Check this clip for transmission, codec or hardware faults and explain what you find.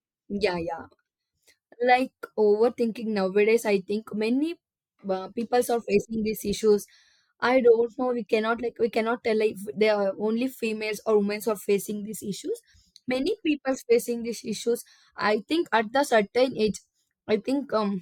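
No transmission, codec or hardware faults are audible anywhere in the speech.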